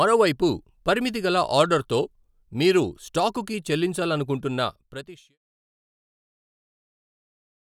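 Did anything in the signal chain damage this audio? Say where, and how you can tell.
No, nothing in the chain seems to have hurt this speech; the only change in level is an editor's smooth fade-out that begins at about four and a half seconds and is finished by 5.38 s, with no click or hard edge.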